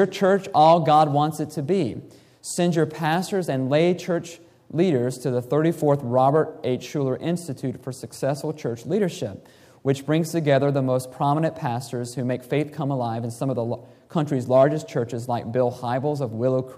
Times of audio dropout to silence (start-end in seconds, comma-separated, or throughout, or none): none